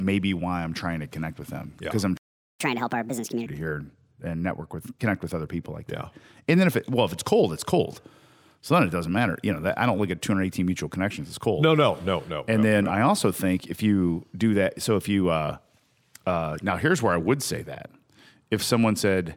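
At 2.17 s, right after "them because yeah I'm", the speech cuts out mid-flow and silence holds for about 0.43 s until 2.60 s. This playback stall was likely caused by the player running short of data or having its output thread blocked.

From 2.60 s to 3.46 s the speech rushes forward, noticeably higher and chipmunk-like, before settling just ahead of "here and network with". This catch-up at higher speed comes from the player resampling its backlog to 1.5 times normal rate, which raises pitch by about seven semitones.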